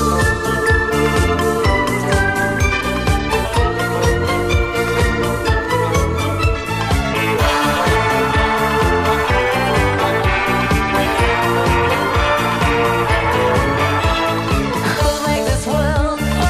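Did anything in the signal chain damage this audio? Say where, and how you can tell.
No, nothing in the signal chain audibly damaged this audio; level, continuity and bandwidth hold steady throughout, with no point where any stage leaves a mark on the sound.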